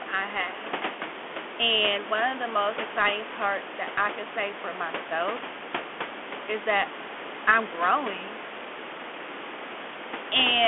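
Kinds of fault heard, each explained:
Bluetooth CVSD headset codec: The speech runs through the narrowband headset path, where each sample is coded as a single up-or-down bit with an adapting step size, which fits a 64 kbit/s link. Nothing survives above about 3.8 kHz, and the band sits roughly between 250 Hz and 3.4 kHz. The coding damage is plainly audible: loud sibilants smear into scratchiness and a granular hiss rides under the speech, alongside room noise about 11 dB below it.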